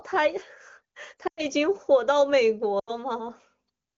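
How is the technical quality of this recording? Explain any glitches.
The speech has two short glitches over clear wideband sound that fits AMR-WB (HD Voice) at a high bitrate. Lost AMR speech frames occur at 1.27–1.46 s and 2.79–2.92 s. The decoder reused the last good pitch and vocal tract settings with falling gain, so the sound smears briefly and fades before recovering.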